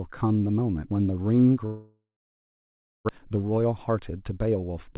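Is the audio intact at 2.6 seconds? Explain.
No. At 2.6 seconds you're inside what sounds like a long network dropout, running from about 1.66 to 3.11 s. The sound breaks off, the last bit gets stretched into a buzzy or hissy tail that fades out, and then there's about a second of silence. What's likely happening is that packets stopped arriving, so the receiver kept concealing until it gave up. Around 0.8 s of real audio never comes back, and the timing shifts by roughly half a second when playback resumes.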